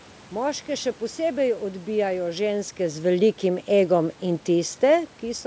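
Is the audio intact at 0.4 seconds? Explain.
Yes, the audio is intact at 0.4 seconds, with no fault at that moment.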